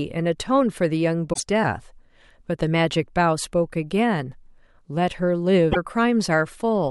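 Speech clip with two short hits of damaged data in a compressed stream: one from 1.29 to 1.40 s and another from 5.68 to 5.77 s, each roughly a tenth of a second. Both sound like brief glitches cutting into the speech. What's going on is that some bytes of the encoded stream got mangled, so the decoder misreads those frames, loses its place, and scrambles to lock onto the next valid frame header before playback settles again.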